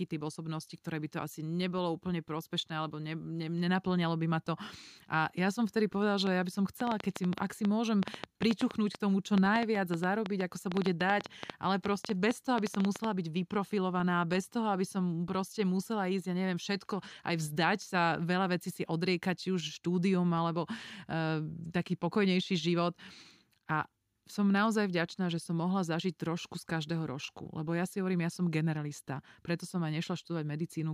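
At 6.27–13.05 s, likely interference injects a train of clicks: about fifty irregular pops, roughly 7 a second, peaking about 15 dB over speech.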